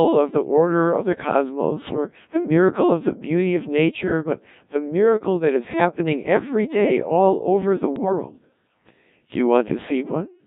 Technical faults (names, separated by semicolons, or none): Codec 2 vocoder; bit errors on digital voice radio